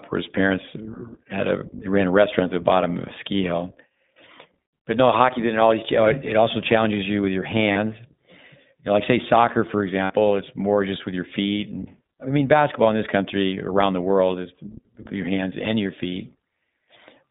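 From the start the whole clip carries the sound of the iLBC codec, a narrowband VoIP coder working in 20 ms frames. Everything sits in a telephone band of roughly 150 Hz to 3.7 kHz, so nothing above 4 kHz gets through, and the speech has that slightly rough, synthetic edge. The coding damage is plainly audible. The rate is 15.2 kbps, and each frame's excitation is coded on its own.

At 7.72 s, right after "challenges you with your", you get lost iLBC frames. About 40 ms goes missing, which fits two dropped 20 ms frames. The decoder fills the hole by repeating the last pitch cycle with some noise mixed in, so it comes across as a brief held, faintly buzzy vowel. The frames are independent, so the speech snaps back almost straight away.

The same thing happens again at 10.04 s, between "like say soccer for" and "it's more just with". This time the gap is longer, about 60 ms or three frames. 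The concealment stretches that repeated, breathy pitch cycle over the whole gap and lets it fade a bit. Then the next good frame arrives and the speech recovers cleanly.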